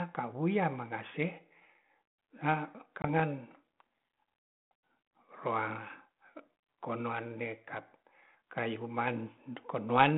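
At 3.02 s the speech drops into a brief, hard-edged silence of about 20 ms. When it returns, it comes back slightly distorted, and it only settles by about 3.20 s. This is packet loss on an ADPCM call, here on a 32 kbit/s G.726 line band-limited to roughly 150 Hz to 3.5 kHz. What is missing fits a single lost packet. The gap was filled with silence, leaving the decoder's adaptive predictor and step size out of step with the sender's, and the sound stays distorted until they realign.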